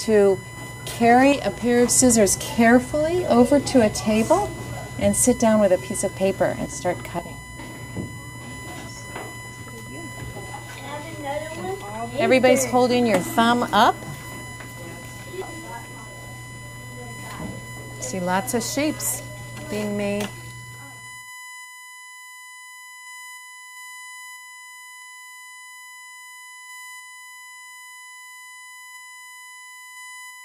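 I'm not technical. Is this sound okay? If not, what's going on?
No. A steady, high-pitched whine runs under the sound for the whole clip. This is USB whine. The computer's USB connection draws power in bursts a thousand times a second, and that leaks into the audio. It sits at 1 kHz, strongest at 2 kHz.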